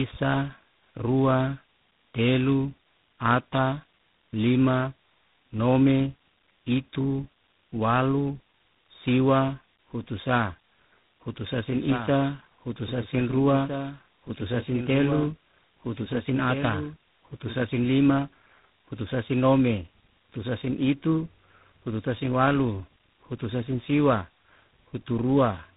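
Throughout, the speech sounds rough, muffled and warbly with nothing above 3.8 kHz. This is tandem speech coding, fitting GSM, G.711 and G.726 links re-encoding in turn.

From 11.67 to 17.63 s, a copy about 10 dB quieter trails roughly 1.5 s behind, starting and stopping abruptly. This is likely a doubled audio track.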